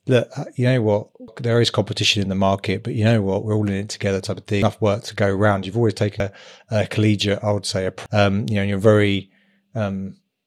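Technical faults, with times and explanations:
1.28 s, 4.62 s, 6.20 s and 8.06 s: damaged data in a compressed stream. Each event is a brief chirp or blip: before "there is competition in", between "it together type of" and "work to go around", and after "collegiate I would say". Corrupted bytes are misread by the decoder. It loses frame sync until the next header.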